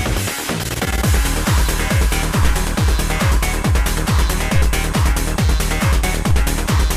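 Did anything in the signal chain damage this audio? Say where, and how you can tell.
Yes. DC steps at 2.43 s, 4.56 s and 6.31 s come from the converter or analogue input stage. At each one, the waveform's zero line jumps by about -11, -11 and -13 dBFS, giving a low thump. Each offset then decays away, as if through a 2 Hz high-pass.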